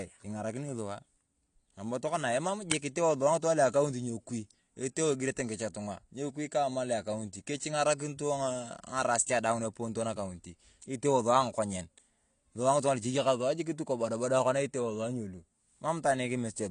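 Throughout the speech, the sound is dull and smeared, with a warbling, fizzy edge on sibilants. This is likely AAC compression, consistent with AAC-LC at around 32 kbps. On a spectrogram, the energy stops abruptly at a flat ceiling near 9.8 kHz.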